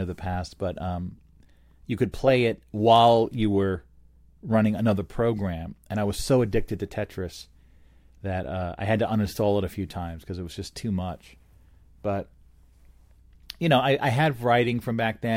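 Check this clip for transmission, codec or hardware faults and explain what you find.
The clip has one fault, mains hum, present from start to finish under the speech. A ground loop or nearby transformer is leaking the 60 Hz power line into the signal path, leaving a steady low tone at 60 Hz plus a few low harmonics, sitting roughly 35 dB below the speech. Unlike broadband low-frequency rumble from handling or wind, it holds a fixed pitch and never varies with the talker.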